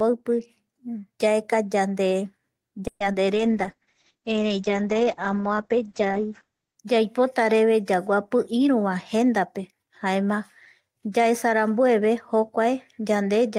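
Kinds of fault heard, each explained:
call audio freeze: From 2.87 to 3.02 s the sound stalls into a fading buzz and about 50 ms of silence, likely packets held up emptying the jitter buffer.
short concealed packet loss: A brief smear at 3.12 to 3.15 s, where 40 ms never reached the decoder and the receiver patched the gap by extending the preceding sound.
jitter buffer slow-down: Between 3.28 and 3.54 s the speech drags at 88% speed with unchanged pitch, as repeated pitch periods add 37 ms to rebuild reserve.
call bitrate drop: From 3.36 to 6.83 s the speech turns rough and muffled as the encoder falls from 32 to 9 kbps, with bandwidth narrowing from 20 to 8 kHz.
jitter buffer speed-up: From 8.53 to 10.08 s the speech sounds hurried at 107% speed, same pitch, as the receiver trims pitch periods to shed about 150 ms of excess delay.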